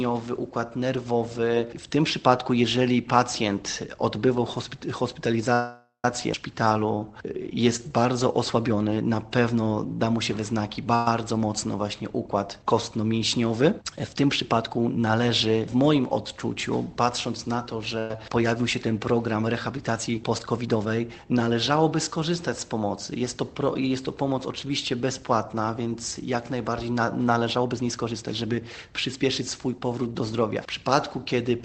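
Call audio freeze at 5.53 to 6.05 s: the sound stops and its last moment is stretched into a fading buzz or hiss for about half a second, ending in 120 ms of silence. The likely cause is packets held up in transit, draining the jitter buffer. When playback resumes, nothing is lost but a 505 ms delay has been inserted.

Skip ahead at 6.33 s: playback jumps forward almost seamlessly, dropping roughly a fifth of a second of audio and joining the two sides nearly directly.

Jitter buffer slow-down from 6.55 to 8.34 s: the buffer builds a reserve by repeating single pitch periods many times in a row. The audio runs at 88% speed without any change in pitch, stretching sounds and adding 229 ms.

Call audio freeze at 10.95 to 11.07 s: a brief 111 ms fill of the held last sound appears with no silence. It is likely caused by another late packet delivery, which again delays the audio without removing anything.

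Jitter buffer speed-up from 13.13 to 15.04 s: small chunks of one or a few pitch periods are cut repeatedly to shrink the buffer's delay. The sound runs at 105% speed and sheds about a tenth of a second.

Burst of packet loss at 17.99 to 18.11 s: a run of packets goes missing, so the last sound continues as a fading 108 ms fill. The audio then resumes 110 ms further on, with that stretch gone.

Jitter buffer speed-up again from 19.34 to 22.15 s at 109% and from 27.56 to 29.41 s at 113%: each pass trims roughly 0.3 s, with a hurried, compressed feel.

Throughout, the Opus call path limits the audio to 8 kHz, consistent with a low bitrate of around 20 kbps.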